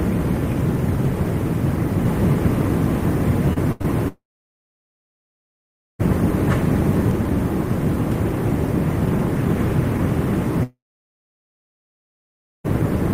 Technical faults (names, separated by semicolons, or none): doubled audio track; short concealed packet loss; burst of packet loss; long network dropout